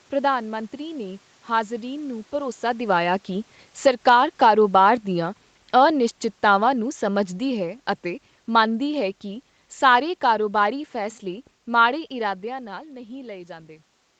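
From 2.68 s to 7.72 s, after "ਮੰਤਰੀ ਨੇ ਹਾਜ਼ਰੀਨ ਨੂੰ", automatic gain falling occurs: the gain control judges the input too loud or its background noise too strong and pulls its gain down by about 7 dB over five seconds, so voice and room noise sink together before "ਅਤੇ ਮੰਨਦੀ ਹੈ ਕੀ".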